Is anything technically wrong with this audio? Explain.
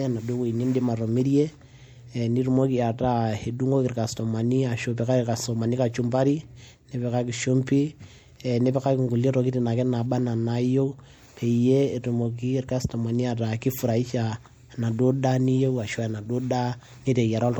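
Yes. Throughout, the speech has low-bitrate MP3 smearing even though content reaches 20.2 kHz. It's likely low-bitrate audio saved at a high bitrate, which fits a 64 kbit/s MP3 re-saved at 256 kbit/s.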